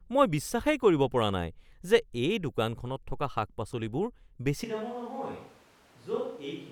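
At 4.65 s the speech abruptly turns roomy and hollow, loses bass, and drops roughly 10 dB, with room noise rising to about 25 dB below the speech until the end. This is likely a switch to a distant microphone after the close one dropped out.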